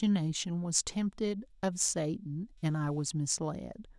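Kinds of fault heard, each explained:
Computer activity noise: There's a faint buzzy chirp under the speech for the whole clip, pulsing at around 300 Hz and sitting roughly 45 dB below the talking, so you have to listen for it. It comes from the computer's shifting load on the processor, graphics or mouse pushing around the ground that the audio circuit shares, so it tracks what the machine is doing rather than anything in the speech itself.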